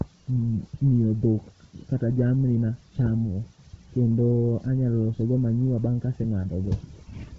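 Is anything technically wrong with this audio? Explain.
Yes. Throughout the speech there is heavy codec damage consistent with Bluetooth LC3 compression, likely from an LE Audio link. Nothing is present above 7.8 kHz, and the top of the remaining band is thinned out and filled with noise, giving the speech a breathy, grainy edge. The depth of that damage fits a low bitrate near 16 kbps. A simple low-pass filter would cut the highs cleanly, while this codec fills them with substituted noise.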